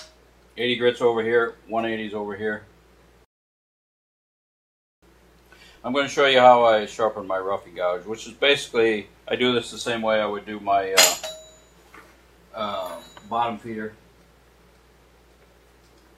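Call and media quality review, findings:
Rebuffering stall, 3.25–5.03 s: playback drops to silence for about 1.8 s, resumes exactly where it stopped. Player buffer ran dry awaiting download; nothing lost, time added.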